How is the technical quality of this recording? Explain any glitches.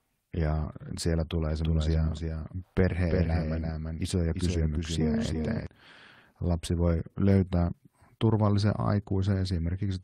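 The recording has one clear glitch: a doubled audio track from 1.65 s to 5.67 s, starting just after "ja siellä tulee". A second copy of the same speech is likely being captured through a slower path and mixed back in, trailing the original by about 300 ms at roughly 5 dB lower. Because the copy is full-band and dry, with no decay or room colour, it sounds like a crisp slapback echo that switches on and off abruptly.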